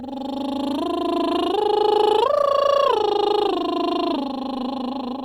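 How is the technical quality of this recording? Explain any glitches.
The music carries three isolated clicks, at 0.71, 2.38 and 3.91 s. Each is likely dropped samples: a handful of samples vanish, so the waveform jumps abruptly, giving one sharp tick and a thin vertical spectral line. Unlike a dropout, no audible sound goes missing.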